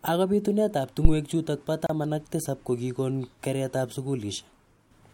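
A short speech recording with two separate problems close together near the start. At about 1.05 s there's a phantom power thump, a low, dull knock lasting to around 1.16 s that dies away quickly, with a decay of roughly 24 ms. That's the signature of phantom power, or some other supply feeding the mic input, being switched while the channel was live. The sudden DC step gets through the coupling capacitors and comes out as that deep bump before the circuit settles. Then at about 1.86 s the speech simply drops out for around 30 ms and picks up again right where it left off. That's a gap at a join of encoded pieces: the audio was encoded in separate chunks and stitched together without trimming. The encoder's start-up delay and the padding on the last frame both stayed in, leaving a brief silent hole with smeared edges.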